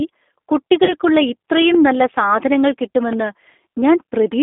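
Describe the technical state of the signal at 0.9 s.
At 0.9 s the sound falls inside a burst of VoIP packet loss concealed by the speech codec, running from 0.84 to 0.93 s, just before "ഇത്രയും നല്ല സാധനങ്ങൾ". The decoder repeats its last pitch and filter with falling gain, so the sound turns into a fading buzzy tone or coloured noise rather than a hard dropout or click. The gap fits about three lost 10 ms frames.

Underneath, the G.729 codec (G.729A at 8 kbit/s) confines the line to roughly 250 Hz to 3.6 kHz and rebuilds speech from pulses, giving a plainly audible rough, synthetic texture rather than the smooth dullness of simple low-pass filtering.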